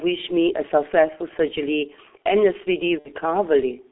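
Throughout the speech, G.723.1 codec coding at 6.3 kbit/s strips everything outside roughly 250 Hz to 3.5 kHz and smears consonants, leaving a heavily muffled, hoarse sound. VoIP packet loss concealed by the speech codec, from 2.99 to 3.11 s: about 60 ms goes missing, fitting two lost 30 ms frames, and the decoder stretches the last sound into a fading buzzy tone or coloured noise.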